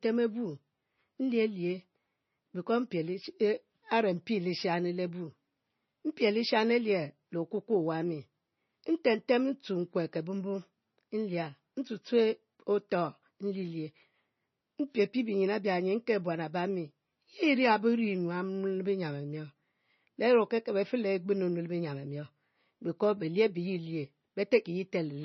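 Heavy MP3 compression runs through the whole speech clip. Nothing is left above about 5.9 kHz, so the top end is cut off flat and s sounds lose their edge. The encoder was short of bits, which fits a rate near 25 kbps. Weak frequency lines drop in and out between frames. This gives a watery, swirling quality with metallic chirps on sibilants, and consonant onsets sound smeared. The likely cause is low-bitrate MP3 encoding.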